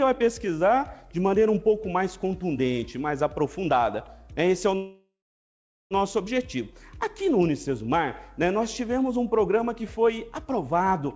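At 4.76 s the sound stops moving forward and a call audio freeze sets in until 5.94 s, likely because packets stalled in transit and the jitter buffer ran dry. The last moment is carried on as a fading buzz or hiss, then about 0.78 s of silence, all below the 8 kHz ceiling of the call path. Unlike a dropout, nothing is lost. The audio resumes exactly where it halted, so everything after arrives about 1.15 s late.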